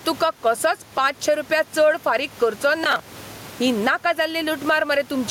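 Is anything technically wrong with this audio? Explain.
Yes, there are two faults.

Gain pumping runs through the whole clip. Loud and quiet passages sit oddly close together and the speech sounds squashed. The likely cause is input gain set far too high, with a fast limiter or compressor clamping down on every peak. It swings the level by something like 15 dB. The room noise sits about 33 dB below the speech.

Processor overload crackle appears from 2.84 to 3.34 s. For that half second a gritty, tearing crackle rides on top of the speech, then stops cleanly. The processor was falling behind and missed deadlines for its small audio buffers again and again. Each missed slot was filled by replaying a stale fragment of earlier audio with hard edges. The texture fits buffers of around 10 ms, with a dozen or more failing over that stretch.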